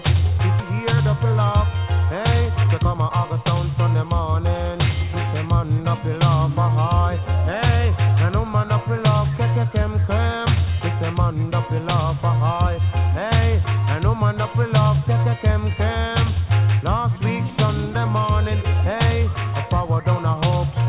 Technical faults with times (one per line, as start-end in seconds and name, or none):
2.41-4.46 jitter buffer speed-up